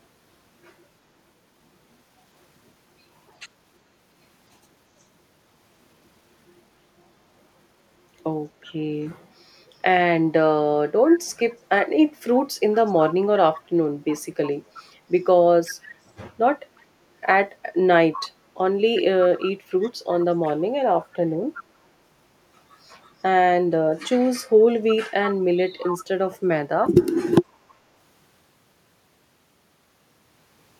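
Echo leak at 11.5–16.8 s, 18.1–20.5 s, 21.54–21.64 s and 24.9–26.1 s: a copy of the speech returns 363 ms late, quietest early and loudest near 25 s. Likely a loudspeaker's echo canceller failed to remove its microphone pickup.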